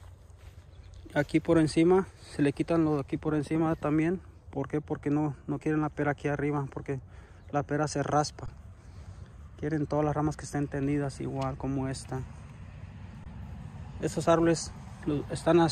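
At 8.46 to 8.48 s the sound stops for 20 ms. This is an underrun with held sample. The output buffer ran dry, and the converter kept putting out its last value until new data arrived. The waveform sits flat for that gap. The same fault returns at 13.24 to 13.26 s, again for 20 ms. In both cases almost no audio was lost. Playback picks up where it stopped, so each gap ends softly rather than with a sharp click.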